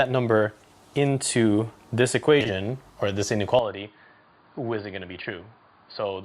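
From 2.40 to 2.50 s, frames play out of order. Two neighbouring blocks of about 40 ms arrived swapped and were decoded that way. The stretch sounds like a garbled flutter. No time is lost.

At 3.59 s the sound turns dull and boxy, with no gap. Nothing passes above 4.8 kHz, the level falls by about 10 dB, and a new noise floor sits roughly 40 dB down. The likely cause is an input switched to a poorer device.

The out-of-order fault returns from 4.01 to 4.04 s, with two roughly 10 ms pieces swapped. It comes back again from 5.21 to 5.26 s, where two roughly 20 ms blocks are exchanged. Each brings a brief flutter.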